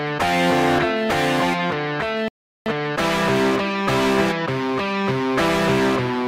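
At 2.28 s the sound cuts to silence and returns at 2.66 s, a playback stall of about 379 ms, likely from the player running short of data or its thread being blocked. It is far longer than a packet dropout's brief gap.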